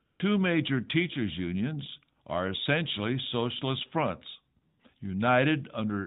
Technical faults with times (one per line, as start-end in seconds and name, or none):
0.06-0.20 AMR comfort noise
4.62-4.80 AMR comfort noise